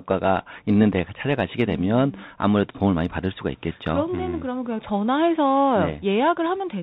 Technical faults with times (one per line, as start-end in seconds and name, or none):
0.00-6.83 Bluetooth CVSD headset codec